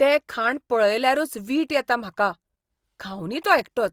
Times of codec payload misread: none

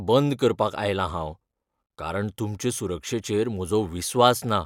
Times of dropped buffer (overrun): none

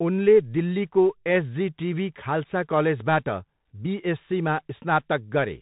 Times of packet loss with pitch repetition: none

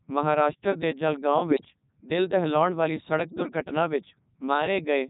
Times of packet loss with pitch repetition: none

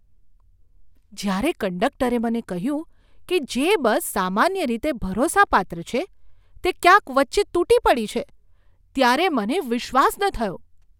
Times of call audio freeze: none

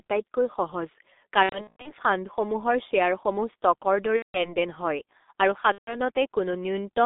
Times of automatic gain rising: none

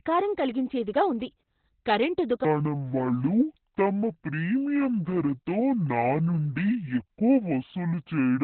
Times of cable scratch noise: none

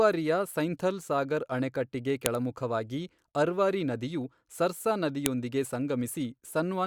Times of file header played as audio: 2.26, 5.26

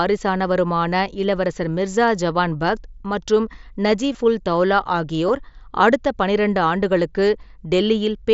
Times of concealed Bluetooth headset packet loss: 4.13, 5.28

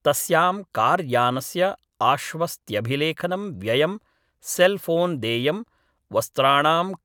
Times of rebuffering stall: none

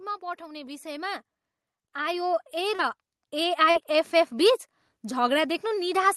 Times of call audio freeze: none

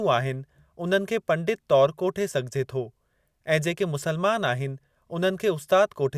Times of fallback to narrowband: none

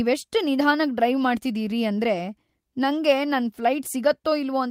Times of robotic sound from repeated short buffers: none

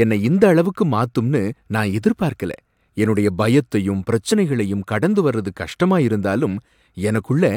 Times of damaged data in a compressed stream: 1.51-1.53, 4.31

